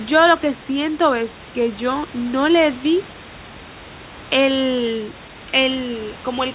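Nothing goes wrong anywhere in this speech clip: it comes over the call line with the top end stopping at 4 kHz, as a G.711 A-law link at 64 kbps would give it, and a little room noise sits about 22 dB under the speech.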